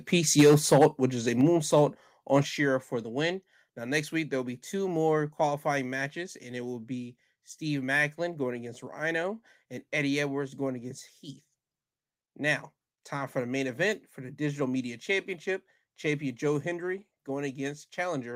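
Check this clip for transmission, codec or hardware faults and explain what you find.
Two related faults appear in the first two and a half seconds of this speech: microphone overload and the microphone volume being stepped down in stages.

Microphone overload runs from 0.38 to 0.86 s, just before "which is a". Peaks push about 6 dB past full scale, with roughly a tenth of samples flattened. A second, milder burst follows at 1.73–1.78 s, just after "which is a", about 1 dB over, with only around one percent clipped. The likely cause is excessive input gain driving the converter to its ceiling. Syllables sound harsh and crackly. The waveform shows flat-topped peaks, and the spectrogram shows broadband vertical smearing above the harmonics.

The microphone volume is stepped down three times: at 0.41 s by about 2 dB, at 1.41 s just after "which is a" by about 5 dB, and at 2.43 s by about 6 dB. 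This is likely software automatic gain control reacting to the clipping. Voice and background fall together, abruptly. The waveform shows a sudden envelope drop, and the spectrogram darkens uniformly across all frequencies.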